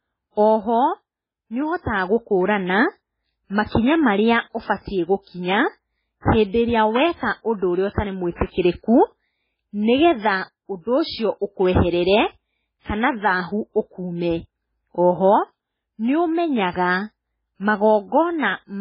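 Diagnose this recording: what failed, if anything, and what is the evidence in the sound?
The codec stage failed. The speech has nothing above 5.3 kHz, with watery, swirling damage throughout. The sound fits MP3 compression at a very low rate, around 16 kbps, which is the likely cause. Starved of bits, the encoder cut the treble and dropped weak frequency lines frame by frame.

Pre-echo appears at 8.36 s, lasting until 8.40 s. A short hiss runs about 44 ms ahead of a sharp attack. The encoder spread its noise across the whole block, so the quiet moment before the onset filled with noise meant for the loud part.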